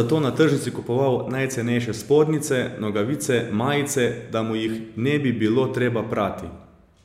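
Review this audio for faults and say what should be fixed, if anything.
No faults; nothing to fix.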